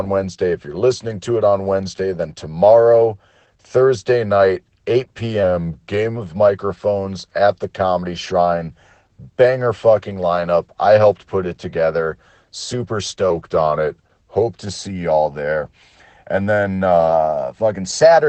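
From start to finish the speech sounds muffled and slightly hoarse, with a faint robotic edge, and nothing is heard above about 8.6 kHz. This is Opus voice compression at a low rate. The codec's SILK linear-prediction coder models the voice with a coarse excitation signal and limits the band to wideband. The audible damage points to a bitrate around 12 kbps, coded in 20 ms frames.

From 13.30 to 14.42 s the speech suddenly drops in pitch by about 112 cents, slightly more than a semitone, and slows by 6.27%. It then snaps back to normal. From 17.12 s to the end, the opposite happens: the speech jumps up about 105 cents and runs 6.27% fast. Both shifts are likely a drift correction step, where clock-matching software changes the playback rate in one jump to refill or drain its buffer.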